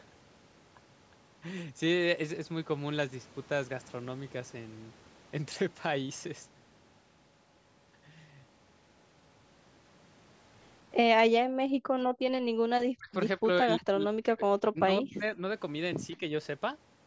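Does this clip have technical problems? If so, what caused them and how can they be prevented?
Yes. Between 11.43 and 12.53 s the room sound dips sharply, by up to about 40 dB for roughly a second, then returns. This is background gated by the echo canceller: while the far end played through the loudspeaker, it clamped the microphone. Tuning the canceller to attenuate less aggressively would prevent it.

From 12.81 to 13.11 s, 13.37 to 14.49 s, 14.68 to 15.42 s and briefly at 16.16 to 16.21 s, the talker's speech dips, deeply at first, then by about 25 dB, and finally only slightly. The likely cause is speech suppressed in double talk, with the canceller turning down both the talker and the loudspeaker echo at once. A headset or a canceller with better double-talk detection would prevent it.

At 16.11 to 16.16 s a faint, delayed copy of the speech appears, arriving 172 ms behind and far quieter than the speech. 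This is likely echo leak, with loudspeaker sound reaching the microphone and slipping past the canceller. Lowering the speaker volume or using headphones would prevent it.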